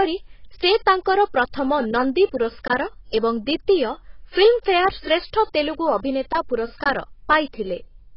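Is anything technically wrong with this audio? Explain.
Yes. Throughout the speech there is heavy AAC compression damage. The cause is likely AAC-LC at a very low bitrate, consistent with about 16 kbps, forcing coarse quantisation and a low cut-off. Nothing remains above 5.5 kHz, so the audio sounds dull and smeared, with a warbling, fizzy texture on sustained sounds and sibilants.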